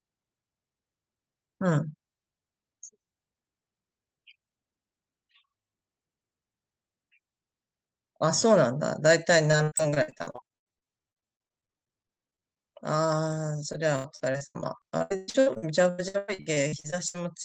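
From 9.51 to 12.65 s and again from 13.73 to 17.16 s, repeated packet loss (robotic sound) chops the speech. Missing stretches are patched by stretching earlier sound, giving a stuttering texture.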